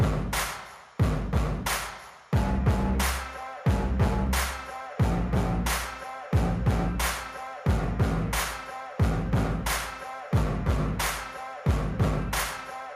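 No technical faults are audible anywhere in the recording.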